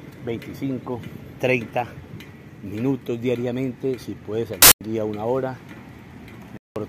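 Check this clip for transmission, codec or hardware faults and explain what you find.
Two dropouts from corrupt frames being muted. At 4.57 to 4.81 s and 6.50 to 6.76 s, damaged compressed frames were rejected and replaced by silence. Each abrupt hole fits about three frames, and timing holds.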